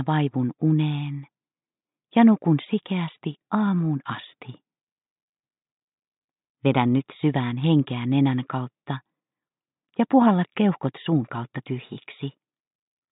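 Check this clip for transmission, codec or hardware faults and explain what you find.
Nothing here stands out as a problem; I couldn't hear anything going wrong with how this sound was carried or captured.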